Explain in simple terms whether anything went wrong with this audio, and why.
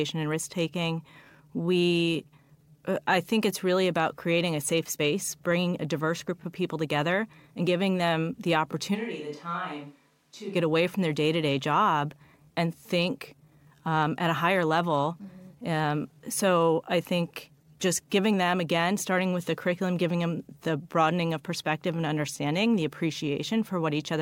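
The recording likely switched to a distant microphone from 8.96 to 10.54 s, so the speech suddenly turns roomy, hollow and quieter, then snaps back.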